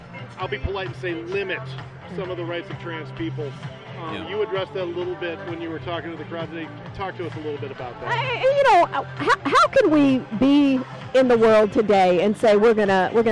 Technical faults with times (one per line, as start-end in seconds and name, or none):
none